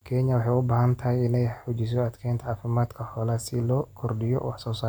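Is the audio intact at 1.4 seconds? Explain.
Yes, at 1.4 seconds the speech plays through cleanly, with no dropout, click, distortion or other fault to be heard at that moment.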